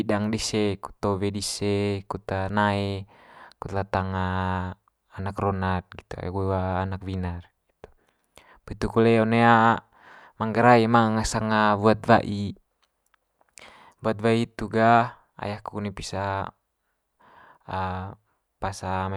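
Listening to the speech recording, nothing stood out as a technical problem at any point.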